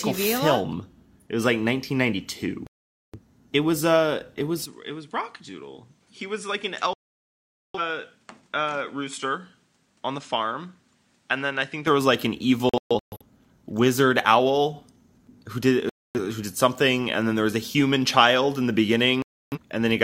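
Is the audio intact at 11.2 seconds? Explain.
No. From 4.66 s, after "it was", until 11.87 s, before "was like an", the input has likely switched to a poorer device. Its narrower band removes everything above 10.5 kHz, so the speech sounds duller and about 10 dB quieter, over a faint new noise floor.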